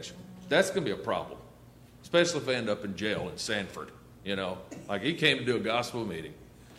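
Nothing technically wrong turns up anywhere in this audio, so there's no fault to point to and no cause to chase.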